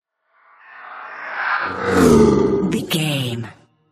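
At 2.78 s there is a brief disturbance caused by damaged data in a compressed stream. A short run of the encoded bytes at that point was corrupted, so the decoder could not read those frames correctly, lost frame sync and had to search forward for the next valid header before resuming. The result is a momentary break in the sound, heard as a chirp, squawk, click or short gap, after which playback continues from the recovered frame.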